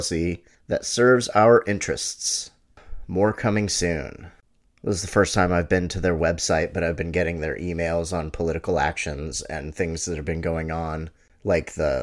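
Nothing in the recording stood out as a technical fault on listening.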